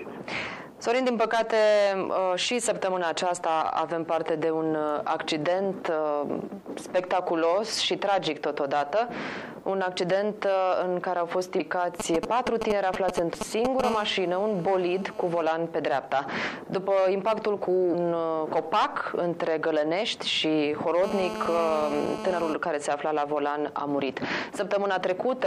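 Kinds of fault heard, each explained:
Compressed frames skipped: Whole compressed frames never reach the output, so the audio jumps forward, roughly 150 to 200 ms at 11.59, 13.33 and 17.93 s, which fits a frame length near 23.2 ms.
GSM signalling bursts: A nearby 2G handset transmitting only intermittent groups of bursts, as when setting up a call, gets rectified by the audio circuitry. From 12.0 to 13.8 s this gives a galloping run of brief 217 Hz buzzes, roughly as loud as the programme.
GSM phone buzz: A handset in a call transmits bursts 217 times a second, and the audio circuit demodulates them into a hard, raspy 217 Hz buzz full of harmonics and unrelated to the programme, heard from 13.84 to 15.43 s at about -12 dB and 21.04 to 22.54 s at about -8 dB.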